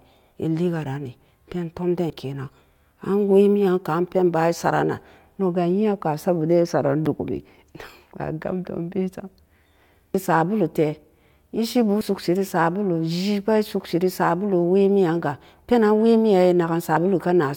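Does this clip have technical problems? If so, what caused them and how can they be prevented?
Yes. The recorder likely drops a short stretch each time it closes one 5-second chunk and opens the next. This causes audio missing between chunks: skips of about 40 ms at 2.1 s after "ran nee pen tom", 7.06 s, 12.01 s before "sokse ree", and 16.97 s, with the edges butted together. To prevent it, record continuously or overlap chunk boundaries so that no samples fall between them.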